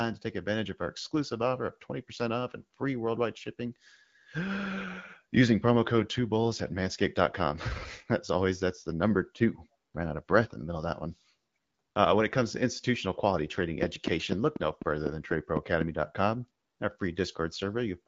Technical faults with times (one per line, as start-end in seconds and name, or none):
13.83-15.82 train of clicks